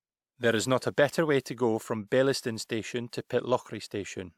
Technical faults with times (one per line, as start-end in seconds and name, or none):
none